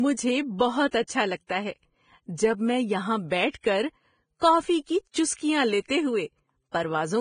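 From start to end, the speech carries heavy Vorbis compression damage, likely from a low bitrate near 22 kbps. Nothing survives above 9.7 kHz, so a spectrogram shows a hard ceiling there, with grainy, noise-like treble replacing fine detail beneath it. Sibilants turn hissy and consonant attacks sound blurred.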